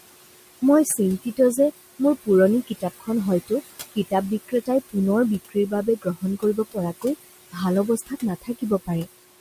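Throughout the speech, the noise suppressor is pulling down the bands it treats as steady noise by about 18 dB frame by frame, so the room noise, sitting about 14 dB below the voice, ducks between phrases and swells back under speech.

The same processing also causes speech cut by the noise suppressor, mistaking quiet parts of the voice for background. From 0.85 to 1.57 s, just before "যে মোৰ পুৰণি", about a tenth of a second is lowered by up to about 15 dB. The same happens from 2.67 to 3.08 s, between that phrase and "হয়তো কিতাপ", and again from 4.48 to 4.95 s right after it, the last by about 16 dB. From 5.49 to 7.04 s roughly a third of a second drops by about 18 dB, and from 8.42 to 9.07 s a shorter stretch drops by the same amount. These moments sound swallowed and faint.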